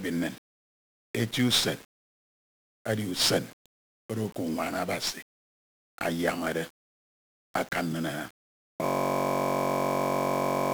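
From the first moment the speech is coated in a fuzzy, crackling grain, with the upper frequencies sunk under a bed of hiss. That is heavy 1-bit DFPWM compression. Each sample is reduced to a single bit that only nudges an adaptive level up or down, so the waveform is traced in coarse steps and the leftover error spreads as loud broadband noise. The amount of damage fits a 48 kbps stream.

At 8.86 s the speech stops and gives way to a steady, rough buzz at about 47 Hz that continues to the end. This is a system hang loop. The computer or its driver froze, but the sound hardware kept replaying one 21.33 ms slice of audio from its ring buffer, which fits a 1024-sample buffer. Because that slice repeats exactly, dozens of times, the ear hears the repetition rate as a drone rather than as a stutter.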